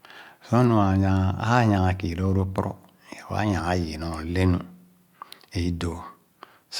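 Speech recording, no technical faults detected.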